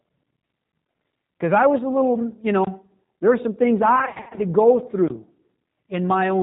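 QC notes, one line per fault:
throughout: G.729 codec. The whole clip has the rough, slightly synthetic grain of a low-rate CELP codec, which fits 8 kbit/s G.729A. Nothing above 4 kHz survives, and the speech is rebuilt from a vocal tract filter plus a sparse pulse excitation, so it sounds plainly rough and synthetic. Simple telephone band-limiting would only sound muffled. This sounds artificial, because the fine structure of the speech has been replaced by the codec's pulse model rather than merely filtered.
3.96–4.40 s: VoIP packet loss concealed by the speech codec. Between "there were some things" and "to go", about 240 ms of audio goes missing in bursts across roughly 400 ms, which points to around two dozen lost 10 ms frames. The longest unbroken gap is 60 ms. A plain dropout would leave silence or clicks. Here the decoder fills each gap by stretching its last pitch and filter state into a buzzy tone or coloured noise that fades. 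Each frame builds on the previous one, so the speech stays weak or smeared briefly after the gaps end.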